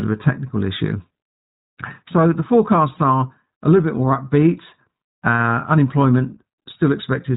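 Speech throughout sounds thin, boxed-in and slightly rough and synthetic, with nothing above 4 kHz. That is the iLBC codec, a narrowband VoIP coder whose frame-by-frame coding, fitting 20 ms frames at about 15 kbps, causes plainly audible damage.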